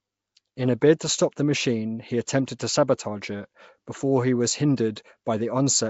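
Throughout, likely Nellymoser compression at a rate that fits 32 kbps fills starved bands with noise, so the speech stops near 7.7 kHz and sounds hissy and underwater.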